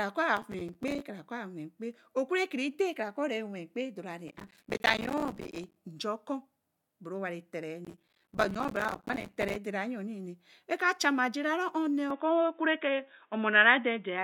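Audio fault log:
0.37–1.00 s, 4.28–5.76 s and 7.85–9.56 s: processor overload crackle. Trains of tiny silent gaps with hard edges, each fitting a missed buffer of about 5 ms. The first run is short and the later two dense, so the speech sounds gritty and torn until each burst ends.
12.10 s to the end: likely an input switched to a poorer device. With no gap at the change, the speech abruptly loses everything above 3.8 kHz and turns dull and boxy. The level shifts by about 5 dB, and a new noise floor sits about 50 dB below the signal.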